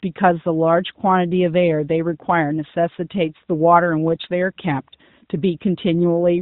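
No technical faults are audible.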